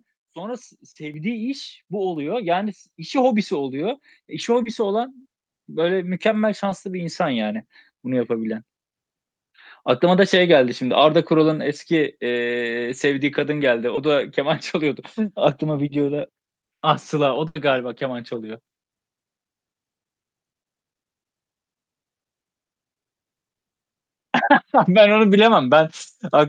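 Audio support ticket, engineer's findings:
Short concealed packet loss at 0.91–0.97, 4.63–4.67, 6.69–6.73, 13.95–13.99 and 24.45–24.49 s. Brief smear or wobble in the speech. Receiver jitter buffer and decoder concealment extended the last sound over 20–40 ms gaps. On the spectrogram, a short patch of smoothed, repeated harmonics.

Microphone volume stepped up at 1.14 s. Speech and background rise together by about 6 dB in one step. Capture-side automatic gain control raised the device input volume. On the waveform, an abrupt envelope step with no decay back, and the noise floor shifts up too.

Burst of packet loss at 17.47–17.57 s. A held buzz or fading hiss, then the speech resumes further on. Network path dropped about 80 ms of audio, and the concealment stretched and attenuated the last frame. On the spectrogram, frozen harmonics fading out, then a hard discontinuity.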